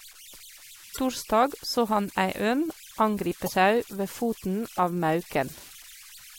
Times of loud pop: none

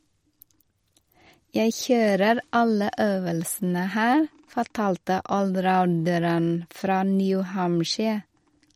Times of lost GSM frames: none

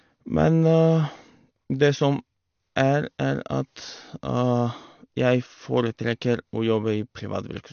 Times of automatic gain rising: none

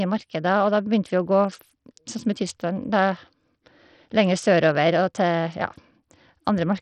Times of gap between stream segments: none

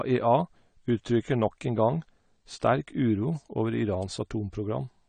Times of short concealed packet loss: none

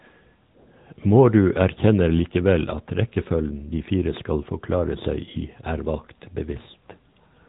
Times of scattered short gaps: none

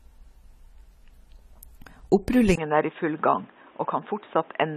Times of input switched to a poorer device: 2.55-4.76

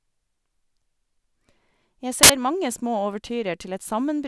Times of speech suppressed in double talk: none

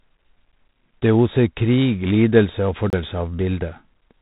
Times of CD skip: 2.90-2.93

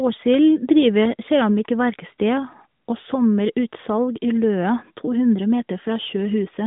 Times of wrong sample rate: none

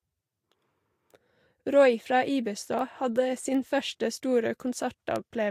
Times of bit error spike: 2.79, 3.54, 5.16

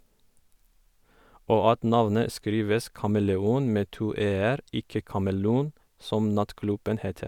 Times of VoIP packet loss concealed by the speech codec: none

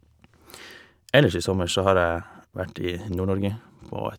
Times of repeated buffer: 1.72, 3.12

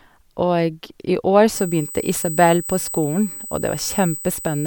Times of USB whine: 1.55-4.67

